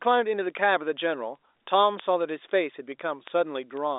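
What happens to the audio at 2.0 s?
The receiving clock runs unlocked from the sender's and slips one sample roughly every 70 ms, so word clock ticks run from 0.15 s to the end as sharp, uneven clicks.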